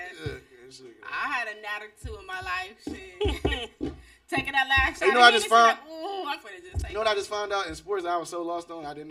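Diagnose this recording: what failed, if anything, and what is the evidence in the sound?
Channel delay (comb filtering) throughout: a buffer offset makes one channel lag roughly 3 ms before mono summing, leaving fixed hollow notches from about 200 Hz, unlike sweeping flanging.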